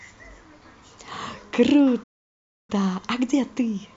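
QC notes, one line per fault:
2.03–2.70 s, playback stall: the speech drops to silence for 0.65 s mid-flow, then carries on, likely from the player running dry of data or blocking.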